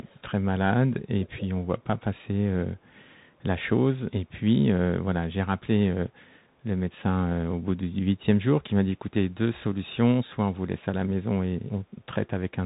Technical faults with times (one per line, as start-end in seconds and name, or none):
0.00-12.65 Bluetooth CVSD headset codec
0.03-0.31 echo leak
1.21-1.45 echo leak